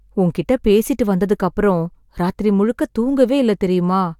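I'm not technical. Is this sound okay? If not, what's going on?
Yes, it sounds fine; nothing wrong can be heard.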